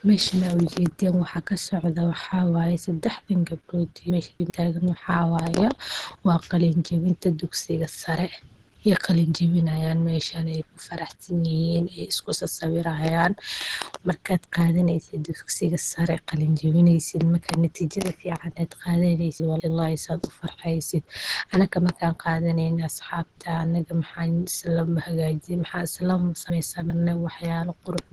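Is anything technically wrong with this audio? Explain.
Yes. Throughout, the speech sounds muffled, hoarse and grainy, with nothing above about 12.1 kHz. This is likely Opus compression at a low bitrate, around 16 kbps, in its hybrid speech mode, which narrows the bandwidth and fills weakly coded bands with noise.

At 4.1–4.5 s, 19.4–19.7 s and 26.5–26.9 s the speech briefly jumbles. These are chunks out of order: a 100 ms chunk plays three, two and three chunks late respectively, so nothing is lost but the sequence scrambles, leaving hard joins.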